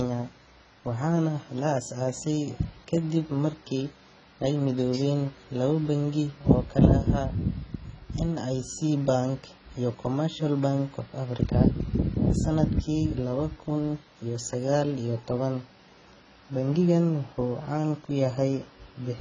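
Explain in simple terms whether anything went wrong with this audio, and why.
The speech was likely squeezed hard by AAC compression, which saves space by discarding detail the encoder judges least audible. Here nothing survives above 9.5 kHz, so from start to finish the voice sounds dull and smeared, with a warbly, fizzy edge on hissy sounds.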